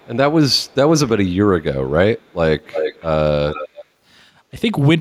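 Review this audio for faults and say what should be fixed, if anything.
Echo leak occurs at 0.0–0.16, 0.58–0.75, 2.18–2.33, 2.63–3.05 and 3.5–3.85 s. A delayed copy of the speech returns. It is faint at 269 ms, then much louder at 325 ms. A loudspeaker echo canceller likely missed part of its pickup. Retuning that canceller or using a headset would prevent it.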